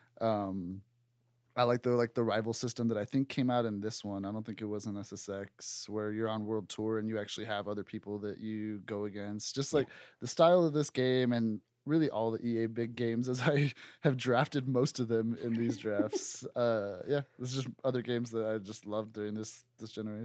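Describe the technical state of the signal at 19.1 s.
At 19.1 s the audio is intact, with no fault at that moment, just the steady call-path sound of speech band-limited to about 8 kHz, as a wideband Opus call would leave it.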